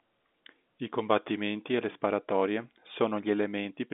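Nothing here is going wrong: the speech just sits in an ordinary telephone band, roughly 200 Hz to 3.6 kHz with nothing above about 3.8 kHz, which is exactly what a standard 64 kbps G.711 A-law phone line gives you.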